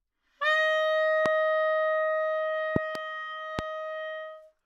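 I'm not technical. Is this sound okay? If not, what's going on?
No. There are three loud pops, sharp thumps much louder than the sound, at 1.26 s, 2.76 to 2.98 s (two in quick succession) and 3.59 s. Unlike a dropout, the sound keeps going underneath. The likely cause is an electrical jolt from a plug, switch or static.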